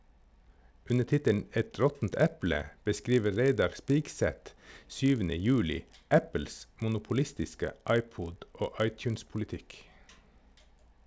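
A 50 Hz buzz rides under the speech for the whole clip, only while there's signal. That's the resampler restarted on every block, which fits 20 ms blocks and a 48 kHz to 16 kHz conversion.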